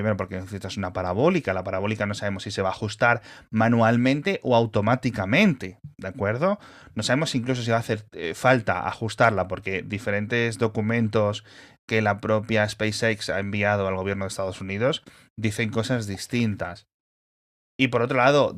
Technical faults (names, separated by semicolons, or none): none